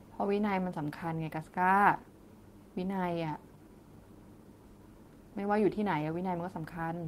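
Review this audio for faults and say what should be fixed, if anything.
Nothing here needs fixing, as no faults turn up anywhere in the speech.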